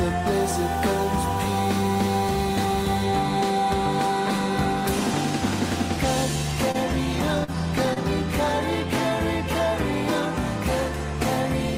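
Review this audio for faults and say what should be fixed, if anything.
A stuck bit in the converter or data line is the likely cause of the distortion from 0.32 to 3.03 s. One bit holds a fixed value, so about half the samples are pushed off by its weight, and quiet stretches fill with noise. Checking converter wiring and running a bit-pattern test on the data path would prevent it.

Short concealed packet loss occurs at 6.71 to 6.76 s, 7.44 to 7.50 s and 7.94 to 7.98 s. Packets missed the decoder, losing about 20, 40 and 20 ms of audio. The receiver bridged each gap by extending the preceding sound before blending back, heard as brief smears or wobbles. A larger jitter buffer and a more stable network link would prevent these dropouts.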